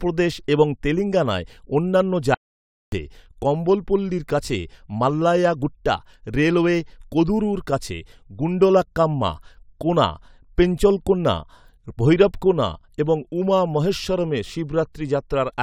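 At 2.34 s, after "এবং তেলেঙ্গানায় অন্যান্য", an audio dropout to silence removes 0.58 s of speech, likely a lost input link, resuming abruptly at "কম্বলপল্লির কাছে মাল্লায়া গুট্টা".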